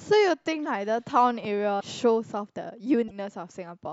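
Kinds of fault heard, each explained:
Broken MP3 bit reservoir: Speech jumps abruptly at 1.79 to 1.82 s and again at 3.07 to 3.11 s, each disturbance lasting about one to two MP3 frames of roughly 26 ms. The likely cause is missing frames, so the following frame reaches back into its bit reservoir for borrowed data and decodes bytes belonging to another frame. On a waveform each event is a sudden discontinuity; on a spectrogram it is a narrow vertical band breaking the speech pattern.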